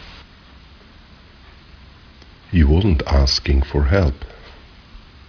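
Aliasing runs through the whole speech clip, from start to finish. The audio was resampled to a much lower rate without an anti-aliasing filter, and the fold point at 5.5 kHz fits a conversion from 44.1 kHz down to 11 kHz. Energy above 5.5 kHz mirrors back below it as unrelated tones, roughly 20 dB under the speech. Sibilants sound gritty and metallic, and the spectrum stays full right up to the band edge.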